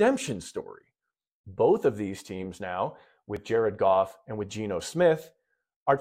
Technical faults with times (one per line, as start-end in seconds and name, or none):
3.36 repeated buffer